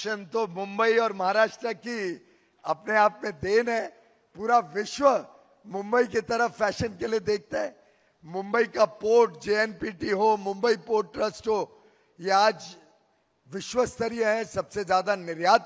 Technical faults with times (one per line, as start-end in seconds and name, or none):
none